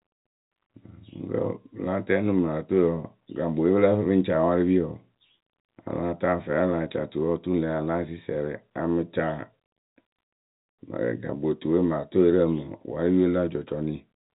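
Nothing goes wrong anywhere in the speech here; it simply carries the narrow telephone sound of G.711 telephone coding, with nothing above roughly 3.8 kHz and only faint traces of the coding.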